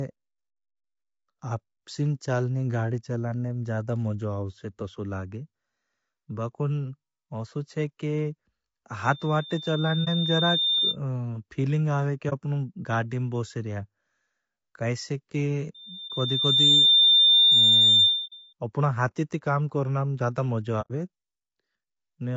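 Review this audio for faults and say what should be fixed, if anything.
Throughout the speech, the encoder is likely running a low-delay AAC compression such as AAC-ELD at a low rate, which fits something around 32 kbps. Its short frames cannot separate the voice's harmonics finely and leave too few bits to fill them. The result is plainly audible: the speech sounds rough and grainy, with noise smeared between the harmonics and a thin, artificial-sounding top band. Giving the encoder a higher bitrate or using a longer-frame codec where delay allows would prevent this.

Loudspeaker feedback squeal occurs twice. A microphone is picking up the loudspeaker it feeds, and at 3.6 kHz the loop gain exceeds one, so that tone feeds on itself. From 9.04 to 10.96 s it swells over roughly a second and a half to around 5 dB above the speech. From 15.74 to 18.53 s it builds faster, in about a second, to around 10 dB above, and ends just before "अपना हाथी ती काम". 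Lowering the gain, using headphones or adding echo control or a notch at 3.6 kHz would prevent it.

AAC frame loss with muting occurs five times. Whole frames never reached the decoder, which zeroed their spectrum, and the overlapping windows fade the sound out and back in, leaving brief dips or soft-edged holes. The gaps are at 10.04–10.08 s and 12.29–12.33 s, both about 30 ms, at 16.08–16.11 s, about 30 ms, at 18.26–18.33 s, about 60 ms, just before "अपना हाथी ती काम", and at 20.81–20.91 s, about 90 ms, right after "करना में ज़्यादा मज़व". Their lengths fit a whole number of lost frames. A more reliable network path, forward error correction or packet-loss concealment that fills gaps instead of muting them would prevent this.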